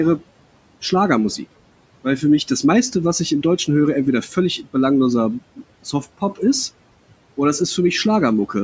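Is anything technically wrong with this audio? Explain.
Yes. Between 5.84 and 6.4 s, the noise suppressor cut speech. It mistook brief speech for noise and dropped it by about 15 dB, leaving roughly a tenth of a second sounding swallowed.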